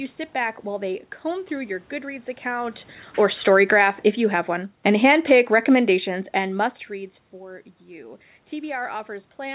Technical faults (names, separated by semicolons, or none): automatic gain falling